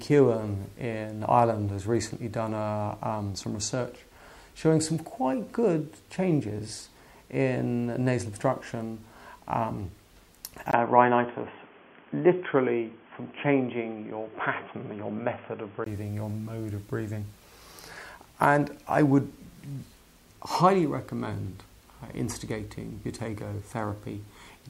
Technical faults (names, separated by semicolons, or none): input switched to a poorer device